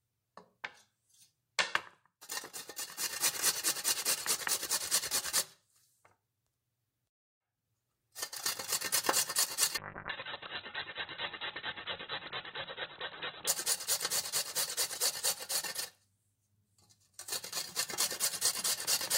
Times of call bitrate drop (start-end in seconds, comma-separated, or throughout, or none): 9.78-13.55